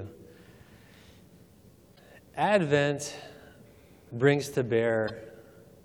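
Two short glitches break up the audio, and both come from damaged data in a compressed stream. The first runs from 1.92 to 1.99 s. The second runs from 5.08 to 5.10 s. Each is a brief chirp, squawk, click or short hole. Some compressed bytes were wrong at those points. The decoder misread or rejected the affected frames and lost sync. It then hunted for the next valid frame header before normal decoding resumed.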